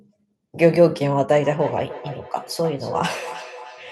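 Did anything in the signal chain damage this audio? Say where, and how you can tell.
Yes, at the call-processing stage: feedback echo between two devices from 1.43 s to the end. The speech returns at a fixed interval of roughly 0.3 s, about 15 dB below the speech. A second device's playback reaches this microphone, beyond the local echo canceller's reach. Room reverberation would blur smoothly rather than repeat discretely.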